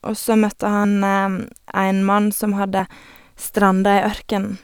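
It's a speech clip with one skip at 0.84 s, right after "så møtte": around 50 ms goes missing, likely audio missing between chunks, with the recorder working in 2-second blocks.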